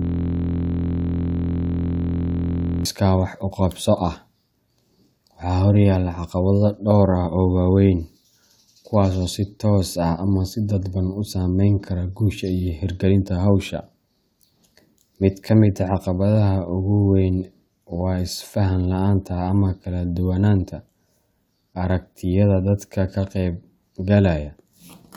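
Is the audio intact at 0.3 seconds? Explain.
No: at 0.3 s the audio is a steady buzz at about 43 Hz, already under way when the clip begins and lasting until 2.85 s, just before "wax u qabso". This is a system hang loop: the system froze while the sound hardware replayed the same 23.22 ms buffer, which fits a 1024-sample buffer.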